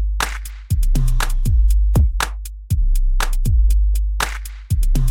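Nothing in this clip stands out as a technical problem; the sound runs along steadily with no dropouts, glitches or level jumps to point to.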